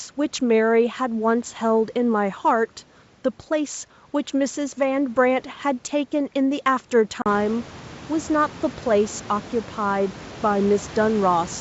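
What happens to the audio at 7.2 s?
Packet loss on an ADPCM call cuts a hard-edged gap of about 40 ms from 7.22 to 7.27 s; the decoder's predictor loses step, so speech resumes with brief slight distortion.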